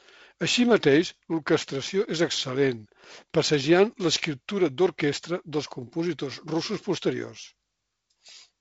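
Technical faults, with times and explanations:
No technical faults can be heard in this speech. It arrives through G.722 wideband telephone coding, with nothing above 7.7 kHz and a light added grain in the lower band that fits the 48 kbit/s mode.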